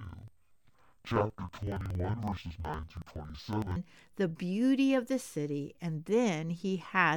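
From 0.00 to 3.76 s, the speech shows interleaved audio read as planar. Each chunk of alternating left and right samples was split down the middle, first half to left, second half to right, so every channel plays its stretch at half speed. Blocks of about 46 ms, which fits a 2048-sample buffer, make the speech drop an octave, sound doubled, and chop along at roughly 21.5 Hz while the pacing stays right.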